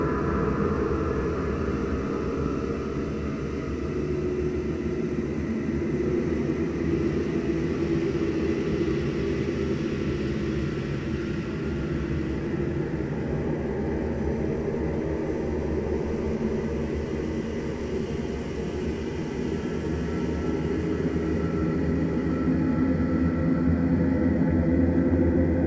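No technical faults can be heard in this recording of sounds. It has passed through a WebRTC call path that is working as intended, with nothing above 8 kHz, which fits a wideband call codec such as G.722.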